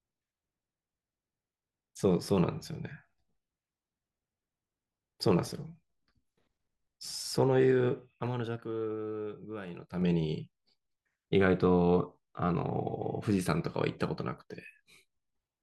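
From 7.02 to 8.48 s, zipper noise: the level drops about 10 dB in coarse 2 dB steps, a few per second, each ticking. It rises back the same way, faster, from 9.64 to 10.08 s.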